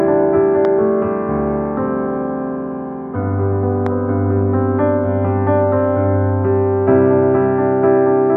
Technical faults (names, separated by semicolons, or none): loud pop